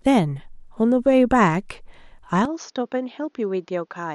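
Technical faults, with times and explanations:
2.45 s to 4.14 s, input switched to a poorer device: At 2.45 s the speech abruptly turns duller and boxier, with no gap at the change. Nothing is heard above 6.8 kHz from there to the end. The level drops by about 10 dB. A faint new background noise appears, roughly 45 dB below the speech. The likely cause is the recording input moving to a lesser microphone or headset, with a narrower band, its own gain and its own noise.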